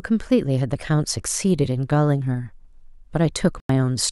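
At 3.60 to 3.70 s, a corrupt frame is muted: the decoder rejects damaged data, leaving an abrupt 94 ms silence that fits one frame and shows as a clean vertical gap.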